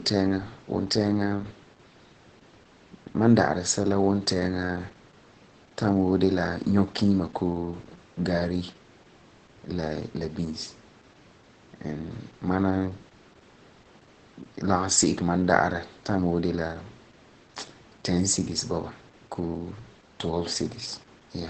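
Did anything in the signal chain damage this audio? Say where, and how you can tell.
Yes. Opus voice compression at the codec stage damages the whole clip: the speech is cut off above about 8 kHz and sounds hoarse, muffled and slightly robotic throughout, which fits SILK-mode coding at around 10 kbps. A plain low-pass filter wouldn't roughen the voice texture like this.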